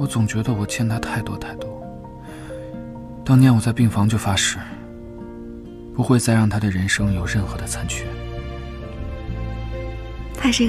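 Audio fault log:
3.07–3.23 s, repeated frames: a 78 ms stretch of audio plays two extra times, lengthening the clip by about 157 ms. It is heard as a stutter. The block length fits a run of three compressed frames being written again.
5.06–5.08 s, repeated frames: a single 26 ms block repeats once, adding 26 ms. It is heard as a brief hiccup, consistent with one duplicated frame.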